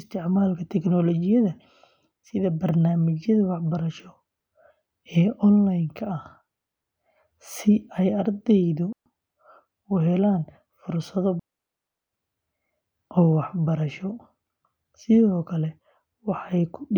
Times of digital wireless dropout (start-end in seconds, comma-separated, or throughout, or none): 8.92-9.06, 11.39-12.13